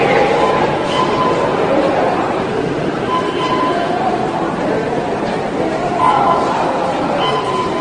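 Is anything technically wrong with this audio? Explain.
Yes. Transcoding between lossy codecs runs throughout: the sound was likely passed through several low-bitrate lossy encoders in turn, each adding its own artefacts on top of the last. Nothing remains above 9.7 kHz, and the artefacts fit a chain ending in AAC-LC.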